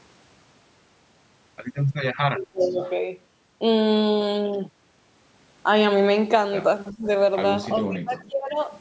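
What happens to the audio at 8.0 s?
From 7.81 to 8.59 s, speech suppressed in double talk pulls the speech down for most of that span, by around 20 dB at its deepest, likely an echo canceller attenuating a talker it confused with loudspeaker echo. The waveform envelope shrinks, and the spectrogram fades faint.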